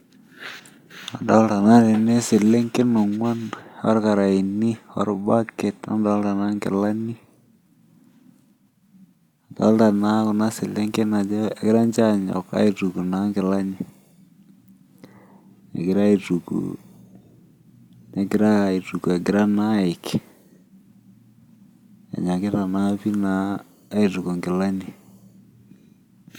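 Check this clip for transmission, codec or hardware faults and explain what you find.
Nothing stood out on listening to the speech here; no transmission, codec or hardware problem could be heard anywhere in the recording.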